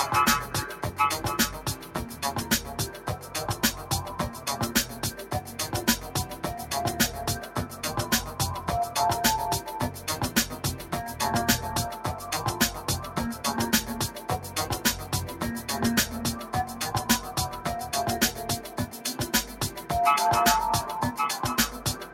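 From the start, a noise suppressor applied to music or sounds is at work. It was built for speech and treats steady material as noise. Held tones, ambience and decaying tails get pushed down, while attacks pass. The loss swings by around 10 dB as the processing reacts. The result is pumping and a thin, unsteady body.

Three passages are cut harder by the noise suppressor. The first runs from 1.76 to 1.95 s. The second runs from 2.95 to 3.31 s. The third runs from 18.67 to 19.0 s. Each time the suppressor misreads the sound as noise. Level sinks by about 5 dB at the deepest point. Each dip lasts roughly a fifth of a second. Sustained parts drop away and tails end early.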